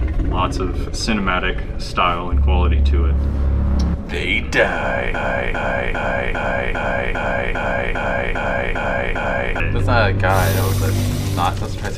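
A stall in the player, encoder or stream likely left it resending its last buffered fragment, producing a broken-record loop from 5.14 to 9.60 s. A 0.4 s piece of sound repeats exactly, back to back, 11 times, and the audio due in that stretch is lost.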